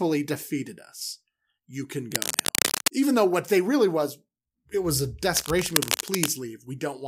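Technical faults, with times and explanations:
2.12 to 2.89 s and 5.37 to 6.33 s, cable scratch noise: two patches of dense, uneven crackle and rustle sit over the speech. The first is roughly as loud as the voice, and the second, right after "was it was a", is a bit quieter. The likely cause is a worn cable or connector being moved, so its contact resistance flickers quickly and pushes ragged bursts of noise into the signal.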